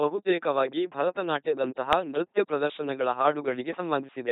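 A buzzing, mechanical robot voice runs through the whole speech clip, with nothing above 3.8 kHz. This is the LPC-10 vocoder effect: each moment is rebuilt from a pulse train or noise through a small vocal-tract filter, which fits heavy coding at 2.4 kbit/s.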